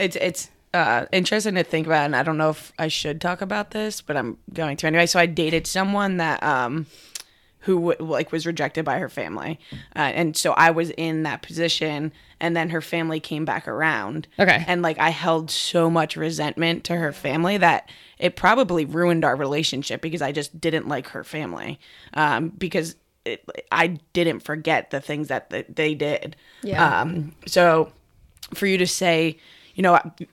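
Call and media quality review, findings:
Nothing stood out on listening; the speech came across without any audible problem worth a ticket entry.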